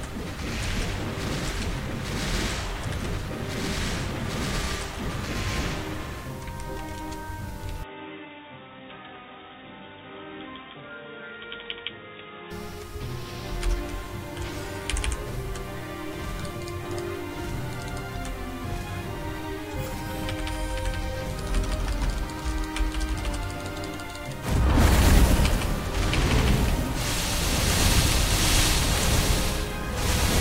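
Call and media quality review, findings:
Input switched to a poorer device, 7.83 to 12.51 s: sound goes dull and boxy with no gap at the switch, nothing above 3.8 kHz, a bit quieter, with new low background noise underneath. Likely the OS swapped capture to another mic or a headset call profile with a narrower band and its own noise floor. Full band returns at 12.51 s.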